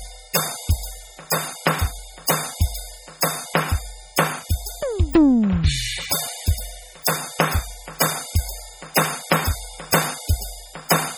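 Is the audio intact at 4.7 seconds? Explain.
No. At 4.7 s the music carries heavy MP3 compression artefacts that run through the whole clip, likely from encoding at a very low bitrate, around 32 kbps. Starved of bits, the encoder cuts off the treble and drops weak frequency lines frame by frame, giving a watery, swirling texture with metallic chirps and smeared attacks.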